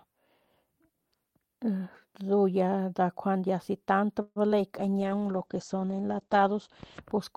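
A call audio freeze runs from 4.21 to 4.38 s, just after "si tant". The sound stalls, and the last sound is carried on as a fading buzz that trails into about 40 ms of silence before the speech picks up exactly where it left off. The likely cause is delayed packets draining the jitter buffer. Because nothing was thrown away, the pause simply pushes the rest of the speech about 145 ms later.

Short concealed packet loss follows at 4.48 to 4.51 s, still close to "si tant". Roughly 30 ms of audio failed to reach the decoder in time. The receiver bridged about 10 ms of the hole by extending the preceding sound and then crossfaded back into the real signal, but about 20 ms is simply gone. What you hear is a quick smear or wobble where a sliver of speech has dropped out.

A call bitrate drop starts at 4.80 s and lasts until 7.08 s. The encoder's budget falls from 48 kbps to 11 kbps and stays at the bottom for about 2.2 s. 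At that rate the codec quantises coarsely and narrows the audio band from 20 kHz down to 8 kHz. The speech turns muffled and watery, losing its air until the bitrate comes back up near the end of the clip.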